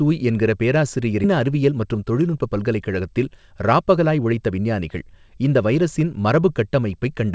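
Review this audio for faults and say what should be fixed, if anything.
At 1.24 to 1.26 s there is a skip ahead. About a second of speech is gone, and playback jumps straight to later audio with no fill. The jitter buffer likely overflowed and discarded queued audio. Sizing the buffer for real burst arrivals would prevent this.

From 1.40 to 4.59 s a jitter buffer speed-up runs the speech at 110% with unchanged pitch. It sounds hurried. The buffer trimmed short pitch-period slices to shed about a third of a second of excess delay. Smoother packet delivery upstream would avoid the backlog that triggers it.

The G.722 call path at 64 kbps has no content above 8 kHz, which is normal for that codec.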